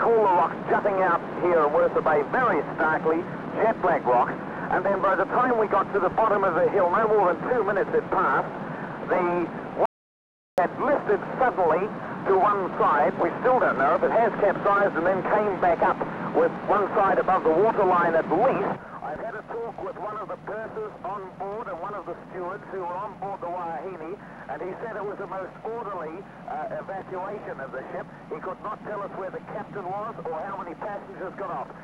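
The audio has a single audio dropout to silence from 9.86 s to 10.58 s, losing about 0.72 s of material. The signal cuts off abruptly mid-flow and resumes just as abruptly, and the gap between is digital silence with no room tone or noise floor, so whatever occurred in that span is unrecoverable. The likely cause is a momentary loss of the input signal, such as a disconnected device or dropped link, while recording continued writing zeros.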